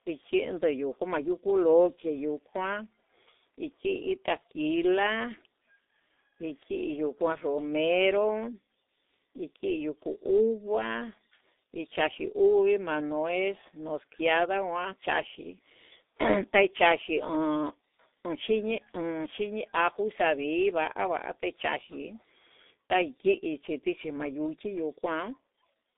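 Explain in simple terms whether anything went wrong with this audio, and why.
G.723.1 codec damage runs through the whole recording. This low-rate phone codec cuts everything above about 3.8 kHz, leaving speech muffled, hoarse, and with smeared consonants.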